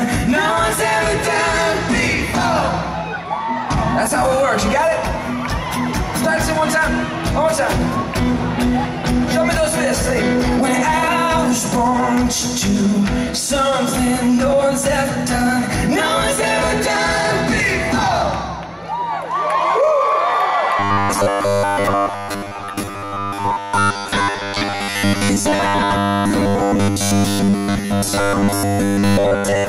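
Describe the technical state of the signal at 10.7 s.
At 10.7 s the signal is intact, with no audible fault at that point.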